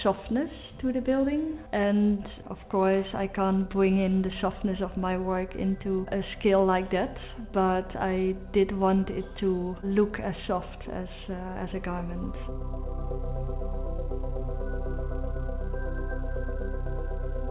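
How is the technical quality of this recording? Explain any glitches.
No glitches can be heard.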